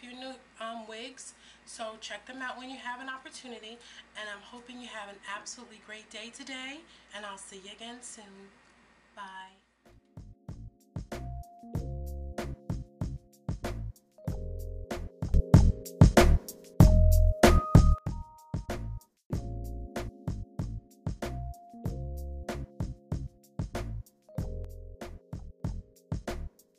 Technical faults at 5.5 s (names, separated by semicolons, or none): none